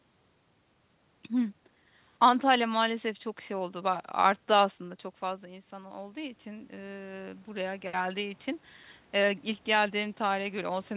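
Automatic gain rising occurs from 5.21 to 8.48 s. The input fell about 10 dB, so the gain climbs about 8 dB. Speech and room noise swell together.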